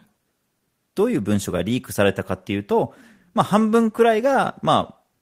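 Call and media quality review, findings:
Nothing stood out on listening to the speech; no finding to log.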